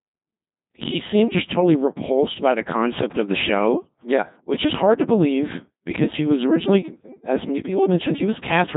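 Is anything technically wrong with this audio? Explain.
Yes, the whole clip has been through a Codec 2 vocoder, and it's heavy damage. The codec doesn't keep the waveform at all. It sends pitch, voicing, energy and a rough spectral envelope, and the decoder rebuilds the speech from sine waves. That's why the voice comes out robotic and buzzy, with nothing above 3.8 kHz. The degree of smearing fits a mode around 2.4 kbit/s.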